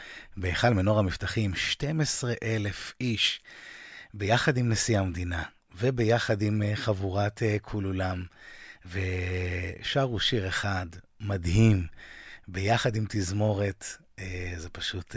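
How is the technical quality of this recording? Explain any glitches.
No glitches can be heard anywhere in the recording, and the signal stays technically intact and continuous throughout.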